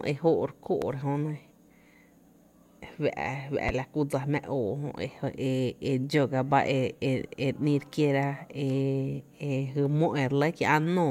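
A loud pop hits from 0.82 to 0.85 s, and another from 3.69 to 3.71 s. Each is a single sharp click, roughly 10 dB above the speech, which carries on underneath. A sudden voltage step, likely from a plug, switch or static, caused them.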